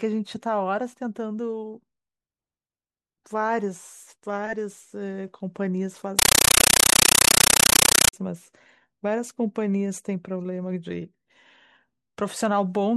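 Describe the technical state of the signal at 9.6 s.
At 9.6 s the signal is intact, with no audible fault at that point in the speech.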